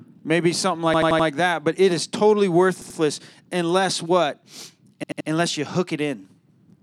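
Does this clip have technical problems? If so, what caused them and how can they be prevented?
Yes, a repeated buffer stutters at 0.94–1.28 s, 2.82–2.99 s and 5.04–5.29 s. The same 85 ms slice, which fits a 4096-sample buffer, loops with hard joins, not silent gaps, and no sound is skipped. Delivering audio to the device on time, for example with a larger output queue, prevents it.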